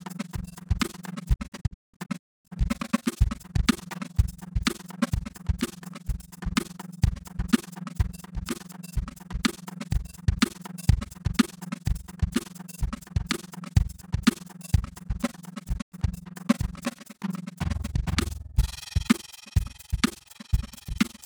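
From the start and through the whole piece of music, the level pulses in a fast, rough flutter, around 20 times a second, with a tremolo that dips about 60 dB deep. This is overlap-add ripple. The audio was split into windowed frames and rebuilt with an overlap whose windows don't add up to a steady gain, so the level swells and sinks once per frame.

Between 1.34 and 2.53 s the music drops out in a run of short silent holes, each entered and left with a quick fade of about 20 ms. Roughly two-thirds of a second of sound goes missing across that stretch, and the longest single gap is 0.26 s. A second, brief hole follows from 15.80 to 15.94 s, about 96 ms long, which fits the loss of a few frames. Both are digital broadcast dropouts. The receiver stopped getting frames it could decode, muted until valid ones returned, and the material sent during those gaps is gone.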